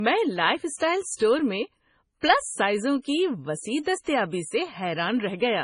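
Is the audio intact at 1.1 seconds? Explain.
No. Throughout, including at 1.1 s, the speech sounds dull with nothing above 10.5 kHz, likely low-bitrate audio saved at a high bitrate, consistent with roughly 24 kbit/s MP3 re-encoded at 192 kbit/s.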